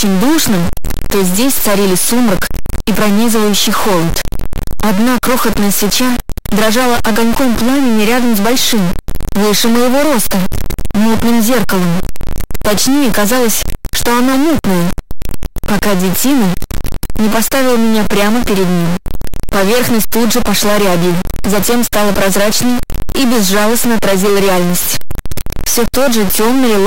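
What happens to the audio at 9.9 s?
At 9.9 s the sound carries a harsh, buzzy distortion that runs through the whole clip. It is likely a stuck bit, with a high-weight bit frozen. Quiet stretches fill with loud noise.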